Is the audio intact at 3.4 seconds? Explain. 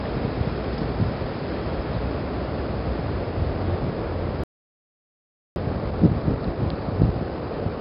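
No. At 3.4 seconds, as throughout, the audio has been through 4-bit ADPCM compression, which codes each sample as a coarse step from a prediction. The heavy coding error rides on louder sound as gritty hiss, and nothing reaches above about 5.5 kHz, which fits a bitrate around 44 kbps.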